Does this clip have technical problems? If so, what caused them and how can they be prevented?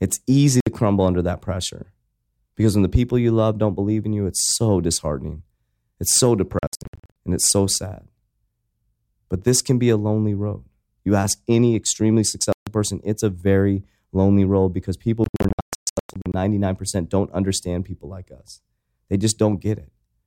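Yes. The speech has Bluetooth dropouts, likely from packets reaching the headphones too late and being discarded. There is a clean 61 ms silence at 0.60 to 0.67 s before "crumble under that pressure" and a 0.14 s gap at 12.52 to 12.67 s. From 6.59 to 7.16 s, before "and it's so sad", there are scattered holes totalling about 0.39 s. From 15.24 to 16.34 s, after "lonely road because people", the holes total about 0.73 s. Unlike an edit or a buffer stall, the speech resumes where it would have been had it kept playing, so nothing is delayed, only missing. Keeping the phone close with a clear line of sight and away from 2.4 GHz Wi-Fi congestion should prevent it.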